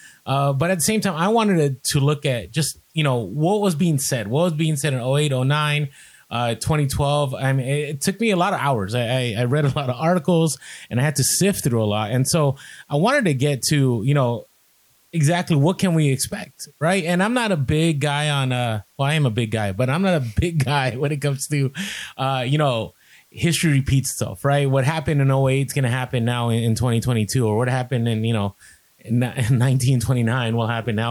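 Low bit depth with dither runs the whole way through: a steady, even hiss roughly 40 dB under the speech, consistent with about 9 bits, with no distortion.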